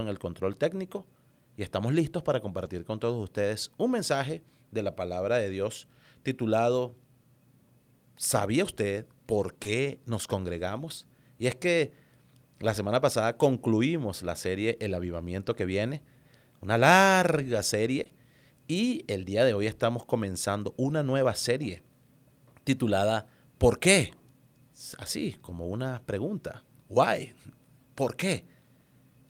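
Speech with packet-loss damage. Lost packets were rebuilt from error correction at 2.65, 9.65 and 20.89 s: each 20 ms frame is a rougher, noisier low-bitrate copy. Short concealed packet loss appears at 9.63 to 9.67 s, where 20 ms of extrapolated sound leads into the rebuilt frame, and at 18.03 to 18.11 s across two back-to-back 20 ms holes. These concealed stretches show as smeared, overly regular harmonics or shaped noise where the waveform's natural detail disappears.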